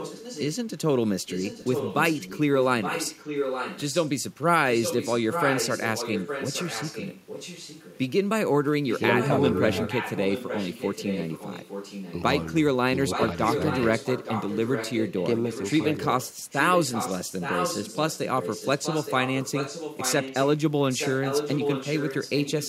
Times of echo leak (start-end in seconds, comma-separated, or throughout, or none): 0.00-0.56, 1.27-4.10, 4.66-7.98, 8.89-12.13, 13.10-20.48, 20.89-22.68